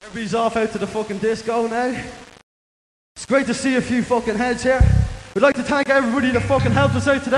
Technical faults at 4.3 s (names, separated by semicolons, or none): none